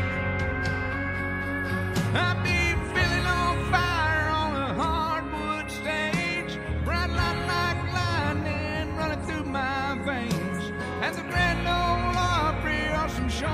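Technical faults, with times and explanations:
No technical faults can be heard anywhere in the signal.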